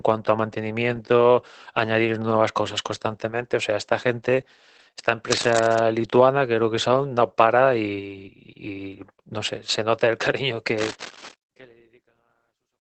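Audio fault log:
throughout: Opus voice compression. SILK's coarse linear-prediction coding leaves the speech muffled, hoarse and faintly robotic, with nothing above 8.4 kHz, which fits roughly 12 kbps.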